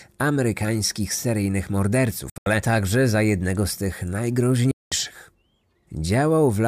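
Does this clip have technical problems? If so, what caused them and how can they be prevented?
Yes. The speech cuts out from 2.30 to 2.46 s in broken gaps, the longest 81 ms, and from 4.71 to 4.92 s. This is a Bluetooth dropout, likely caused by late packets, and the speech resumes as if it had kept playing. Waveform: flat gaps. Spectrogram: blank full-band columns. Keep headphones close to the source and away from 2.4 GHz interference.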